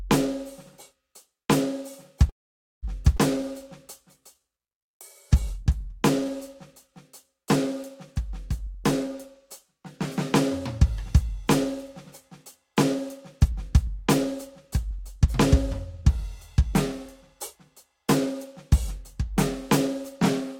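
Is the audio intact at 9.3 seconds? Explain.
No. At 9.3 s the music is inside a jitter buffer speed-up running from 8.59 to 9.81 s. The receiver trims short pitch-period pieces, about 50 ms in total, so the music plays at 104% and its tempo rushes. Unlike a resampling error, the pitch stays unchanged.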